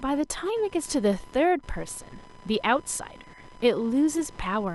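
Right from the start and running the whole length of the speech, there's computer activity noise: a faint whining buzz pulsing at around 1 kHz, sitting roughly 25 dB under the voice. It comes from the computer's load swings (processor, graphics or mouse) pushing around the ground the audio circuit shares, so the buzz follows what the machine is doing rather than anything in the speech.

Near the end, from about 4.13 to 4.20 s, a corrupt frame got decoded: a short squeaky blip lasting around 65 ms, peaking somewhere near -25 dBFS. What's happened is that bits inside a few compressed frames got flipped, and the decoder played them anyway. The misread gains and codes dump energy into the wrong frequencies for about as long as the damaged frames last, which gives that brief chirpy burst.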